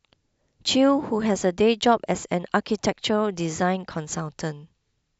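From 1.39 s to the end, channel delay causes comb filtering: one channel lags by about a sample, so the mono sum loses top end, notching near 20 kHz and dulling the speech.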